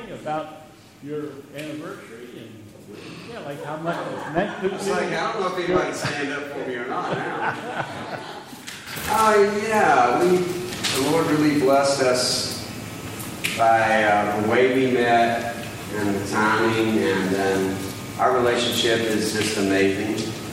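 No technical faults can be heard anywhere in the audio, and the signal stays steady and continuous throughout.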